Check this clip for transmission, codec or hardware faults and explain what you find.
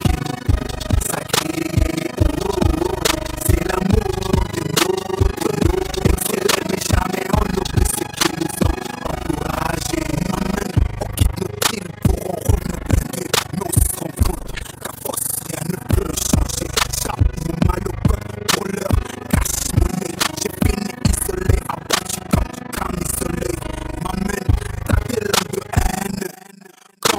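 One fault runs through the whole clip: overlap-add ripple. The audio has been split into windowed frames and rejoined with an overlap whose windows do not add up to a steady gain, so the level swells and sinks once per frame, around 30 times a second, with a depth of about 60 dB. It sounds like a hard, buzzy tremolo or robotic flutter over everything. A waveform shows a regular comb of deep envelope dips, and a spectrogram shows evenly spaced vertical bands across all frequencies.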